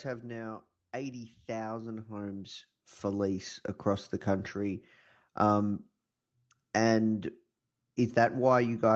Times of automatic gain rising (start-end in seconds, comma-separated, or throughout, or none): 0.91-4.92